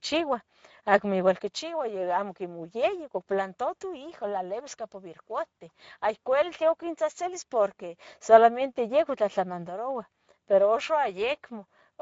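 From start to finish the speech carries Speex codec damage: the excitation is coarsely coded, leaving a hoarse, noisy grain, and nothing remains above 7.7 kHz, which fits a mid-range wideband setting near 17 kbps. Unlike MP3 smearing, there is no watery swirl, only rasp and synthetic upper fill.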